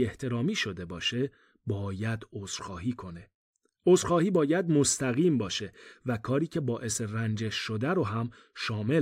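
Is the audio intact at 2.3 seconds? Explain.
Yes, the speech at 2.3 seconds is intact, with no dropout, click, distortion or other fault at that moment.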